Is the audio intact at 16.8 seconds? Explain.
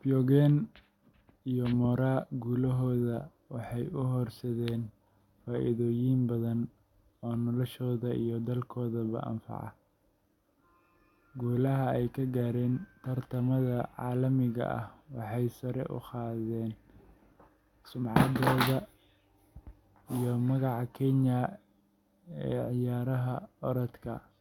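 Yes, at 16.8 seconds the speech plays through cleanly, with no dropout, click, distortion or other fault at that moment.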